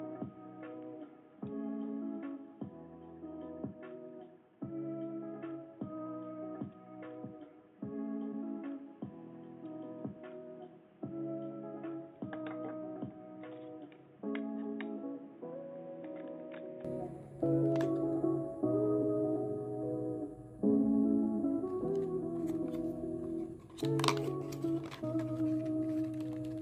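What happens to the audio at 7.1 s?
At 7.1 s you're inside a dull, boxy stretch running from the start to about 16.85 s. It's likely an input switched to a poorer device: nothing comes through above 3.8 kHz, the level sits around 10 dB lower, and there's a new noise floor roughly 30 dB under the signal.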